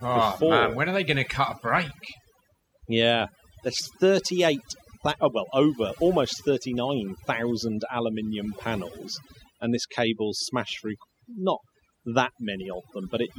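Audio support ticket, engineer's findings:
Background drops and breaks up into twinkling specks, throughout. Overdone noise removal: reduction set too aggressive, gating individual frequency bands near the noise estimate down or out, taking quiet speech detail with them. Probable component: denoise stage.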